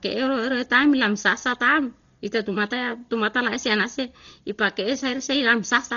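Speech runs the whole way through with heavy damage that is likely Dolby Digital compression, and the damage fits a very low bitrate of about 32 kbps. The sound is dull, because nothing above 6.9 kHz survives. Lines the encoder left without mantissa bits are filled with dither noise, so a rough, fluttering hiss clings around voiced tones. A spectrogram shows a hard ceiling at 6.9 kHz and speckled, grainy noise between the harmonics.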